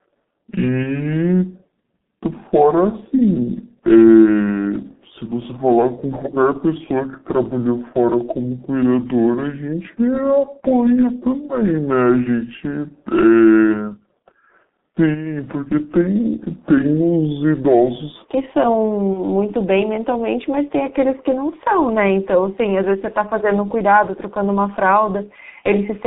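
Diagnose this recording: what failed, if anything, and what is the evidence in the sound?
Throughout, the speech is muffled and hoarse, confined to roughly 150 Hz to 3.7 kHz, with smeared consonants and a rough, coarse texture. This is the G.723.1 codec at the codec stage. Its 30 ms frames and 6.3 kbit/s rate, heavily degrading here, strip detail and track the voice slowly.

From the start to 18.25 s the audio runs slow and deep, at 0.643 times normal speed, with pitch dropped by roughly seven semitones. Speed and pitch fall together, so this section is likely played at the wrong speed against the wrong clock at the playback or editing stage.

At 0.83 to 1.00 s and again at 19.13 to 19.20 s, the speech briefly stretches and fades, and stays weak for a moment afterwards. This is VoIP packet loss concealed by the speech codec. One 30 ms frame was lost in the network each time, and the decoder extrapolated from the previous frame while lowering the gain.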